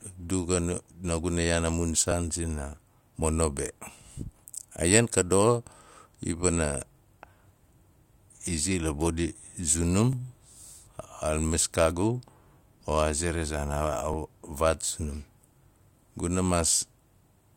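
The speech was processed in 4-second chunks that overlap, so each new chunk starts about 6.5 ms before the previous one ends and that sliver plays twice. The doubled fragment is heard as a click or stutter at 2.12, 6.12, 10.13 and 14.14 s: overlapping chunks.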